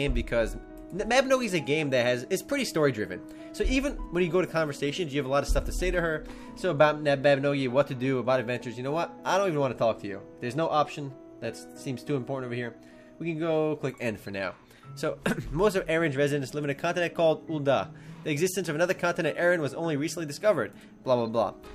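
No technical faults are audible anywhere in the audio.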